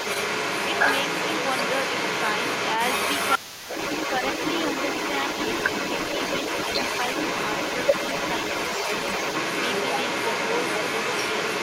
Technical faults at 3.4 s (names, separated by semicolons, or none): other side's voice leaking through; speech suppressed in double talk